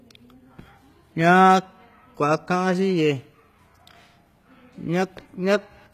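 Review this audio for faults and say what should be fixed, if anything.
HE-AAC compression is the likely cause throughout: the treble is rebuilt by copying lower bands upward rather than coded directly, so s sounds come out gritty and lispy, nothing survives above 14.9 kHz, and the damage fits about 20 kbps. Encode at a higher bitrate to prevent it.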